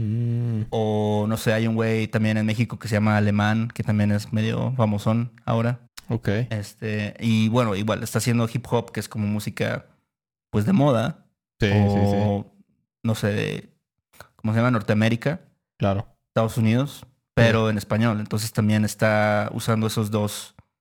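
Periodic clock jitter runs through the whole speech recording. The converter's clock wobbles at about 3 kHz, giving a rough, metallic edge that vanishes in pauses. A spectrogram shows sideband copies of each harmonic about 3 kHz above and below, strongest for higher components.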